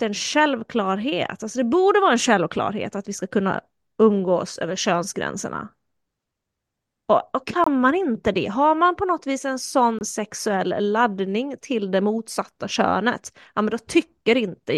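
At 7.64 s the speech drops into a 42 ms hole, consistent with two muted frames, and at 9.99 s a 32 ms gap, likely one frame. Both are corrupt frames muted: damaged data the decoder refused, replaced by silence that starts abruptly while timing holds.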